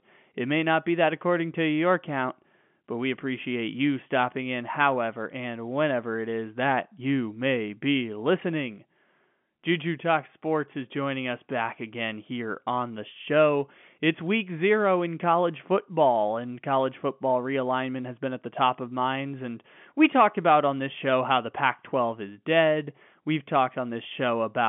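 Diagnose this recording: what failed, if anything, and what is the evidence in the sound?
Nothing failed in this recording.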